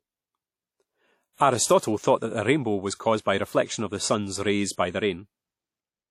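Speech with plainly audible WMA compression throughout: ringing, washy smearing and a hiss that swells and fades with the sound, with nothing above 16.3 kHz. The long-block smear, rather than sharp MP3-style warbling, points to a likely WMA 1 encoder near 48 kbps.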